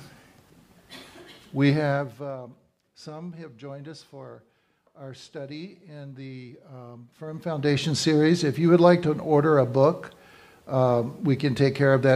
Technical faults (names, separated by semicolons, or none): zipper noise